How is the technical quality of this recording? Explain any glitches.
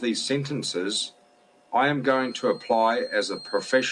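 There's one problem, and it covers the back half. From 2.0 s to the end, a feedback whistle sits under the speech: a thin, steady tone at 4.2 kHz, about 20 dB below the voice and swelling and fading slowly in level. It's most likely a loudspeaker-to-microphone loop hovering right at the edge of feedback, so that single frequency keeps ringing without ever running away into a full howl.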